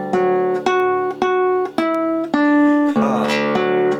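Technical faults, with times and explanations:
0.80 to 3.09 s, word clock ticks: about three sharp ticks, roughly one a second. The receiving end is running on its own clock rather than locking to the sender's, so each time they drift a sample apart, one gets dropped or doubled. That steady rate suggests a clock mismatch of around 20 ppm.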